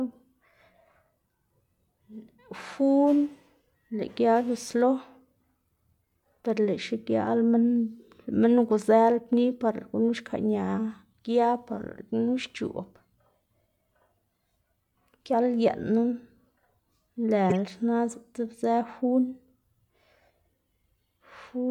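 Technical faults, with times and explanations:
8.68 s and 17.50–17.52 s, corrupt frame decoded. Damaged compressed frames were played as if valid. Misread codes put energy at wrong frequencies, giving brief chirps, squeaks, blips or bursts of noise. The first is faint and spans a few frames. The second is much louder and spans several.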